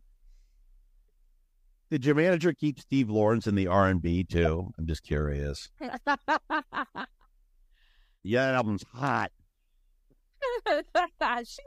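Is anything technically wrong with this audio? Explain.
Yes. Corrupt frames were decoded at 4.45 s (just before "I'm just curious"), 6.21 s and 10.70 s. Flipped bits in roughly one or two compressed frames were played anyway, misplacing energy in frequency. This gives brief chirpy blips peaking near -20 dBFS, with a much fainter one at 6.21 s.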